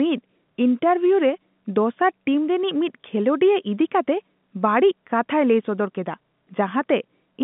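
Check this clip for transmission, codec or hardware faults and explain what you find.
No transmission, codec or hardware faults are present, and the speech carries the expected narrowband telephone character of a G.711 A-law line, passing roughly 150 Hz to 3.6 kHz.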